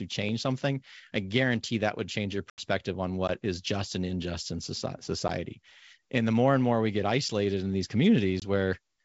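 Packet loss on an ADPCM call hits at 2.50 to 2.60 s, after "that would change your", and at 8.40 to 8.44 s, after "get isolated in these". Silence abruptly fills 80 ms, then 20 ms. The decoder's predictor loses sync, so the speech re-enters with brief distortion.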